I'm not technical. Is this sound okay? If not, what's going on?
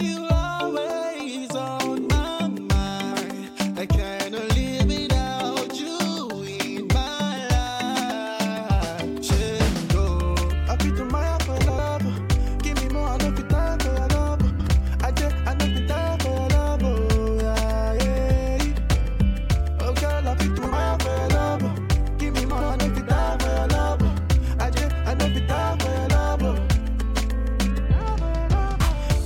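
No. There are four brief garbled flutters at 11.60–11.79, 14.50–14.69, 20.58–20.73 and 22.51–22.71 s, caused by frames out of order: in each spot two short pieces of audio, about 93 ms each (70 ms at 20.58 s), play swapped.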